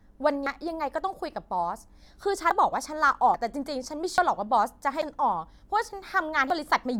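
The speech jumps abruptly at 0.46, 2.51, 3.34, 4.18, 5.02 and 6.50 s, each time with no gap. Most of these skips lose about a tenth of a second, and the one at 2.51 s loses about a fifth. The likely cause is a dropped buffer (overrun), where audio was overwritten before it could be read. The waveform shows a sharp discontinuity at each point, and the spectrogram shows a thin vertical broadband line.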